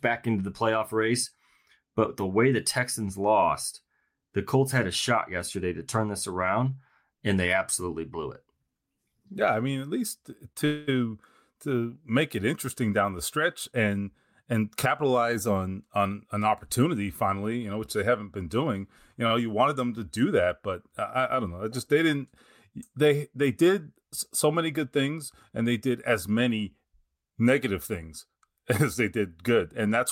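At 10.52 to 10.57 s there is a short stall from a late packet. A packet missed its slot, the jitter buffer ran dry, and the receiver held the last sound for about 30 ms until the packet turned up, then resumed from the same point. Nothing is lost. The sound is simply held a little too long, with a faint buzzy dip. Unlike a freeze, it is too brief to register as a gap.

Right after, from 10.65 to 10.89 s, comes a call audio freeze. The sound is stretched into a buzzy continuation that fades across roughly 220 ms without reaching silence, and then picks up exactly where it stopped. The likely cause is packets held up in transit, emptying the jitter buffer for much longer than in the first stall. That is why it reads as an audible pause rather than a slightly drawn-out sound.

From 13.72 to 15.03 s there is a jitter buffer speed-up. Having built up extra delay after the earlier hold-ups, the receiver trimmed out many tiny slices of a pitch period or so, totalling about a tenth of a second. 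Speech runs at about 106% of normal pace with the pitch unchanged, so it sounds hurried rather than chipmunk-like. Nothing is held or paused, which sets it apart from the stalls.

A second short stall from a late packet, at 19.27 to 19.33 s, holds the sound for about 35 ms in the same way.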